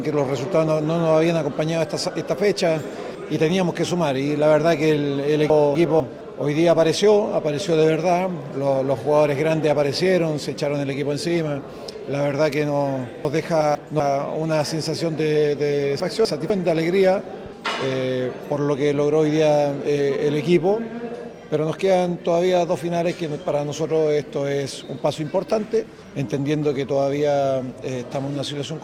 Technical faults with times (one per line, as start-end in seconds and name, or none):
5.50-6.00 chunks out of order
13.25-14.00 chunks out of order
16.00-16.50 chunks out of order